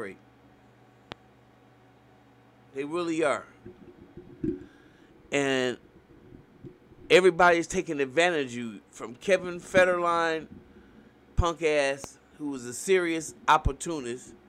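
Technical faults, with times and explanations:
1.12 s and 12.04 s, loud pop: two brief pops, peaking roughly 10 dB then 5 dB above the sound, which carries on underneath; likely a plug, switch or static voltage spike.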